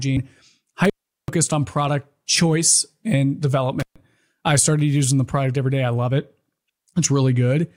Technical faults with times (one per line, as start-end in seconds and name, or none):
0.85-1.29 intermittent contact
3.80-3.96 intermittent contact